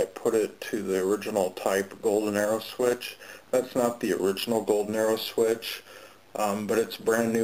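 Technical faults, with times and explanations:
Throughout, overlap-add ripple: the level swells and dips by about 6 dB at a steady rate of roughly a hundred times a second, giving the whole sound a metallic buzz with extra tones around it. The audio was evidently split into windowed frames and rejoined with an overlap whose window sum is not flat, so the gain peaks and sags once per frame. That points to a hop of around 10 ms.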